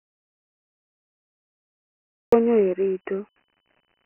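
From the start until 2.32 s the clip is an audio dropout to silence: plain silence with no room tone, likely from the input being lost while the recorder kept writing. The waveform is a flat line and the spectrogram is empty until speech begins abruptly.

Throughout, the sound carries Dialogic VOX ADPCM damage: heavy gritty hiss tracking the speech, which fits 4-bit ADPCM at about 24 kbps. The spectrogram shows a telephone-like band from about 250 Hz, with nothing above 2.9 kHz.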